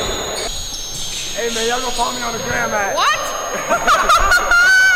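A thin, high whistle runs under the sound from start to finish, its pitch wandering between about 6.3 and 6.8 kHz and sitting only around 15 dB below the main signal. This is switching supply whistle: a switch-mode power supply is cycling at an audible rate, or beating against another supply, and the tone drifts as the load it feeds shifts.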